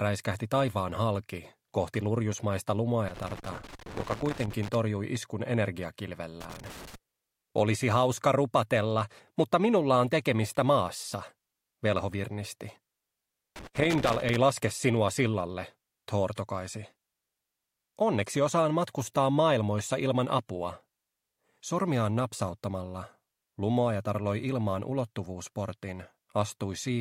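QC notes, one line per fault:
3.08–4.75 s, 6.41–6.95 s and 13.56–14.36 s: loose connector crackle, three irregular bursts of crackle and scratching lasting about 1.7 s, 0.5 s and 0.8 s. A worn or dirty contact somewhere in the signal path is making and breaking rapidly as it shifts, so the audio is chopped on and off many times within each burst. Those abrupt interruptions are what produce the scratchy, uneven texture rather than a steady noise.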